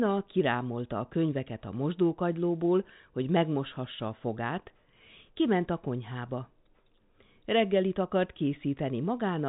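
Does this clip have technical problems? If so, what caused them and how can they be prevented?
No, nothing stood out on listening to this speech clip, which carries the narrow telephone band of G.711 telephone coding with nothing heard above about 3.8 kHz.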